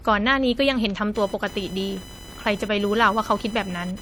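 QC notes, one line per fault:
throughout: transcoding between lossy codecs, with two sets of smeary artefacts stacked up, likely an MP3 pass then HE-AAC at around 48 kbit/s; nothing above 20.3 kHz.
1.15–4.01 s: computer activity noise, a chirpy buzz pulsing at roughly 1 kHz, about 20 dB under the speech, where machine load is leaking into the audio ground.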